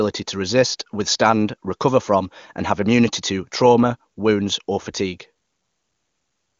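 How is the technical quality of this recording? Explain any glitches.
No glitches turn up anywhere in the recording; the speech has the band-limited character of an AMR wideband (HD Voice) codec running at one of its higher rates, where any coding damage is faint at most.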